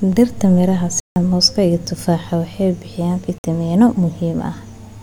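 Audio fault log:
1.00 to 1.16 s, block of digital silence. A 160 ms stretch of the speech drops to silence. The signal stops and restarts with no fade. At this length it is heard as a short hole.
3.38 to 3.44 s, block of digital silence. A second zeroed block, about 57 ms long, with a hard cut in and out again. It is short enough to be heard as a brief dropout.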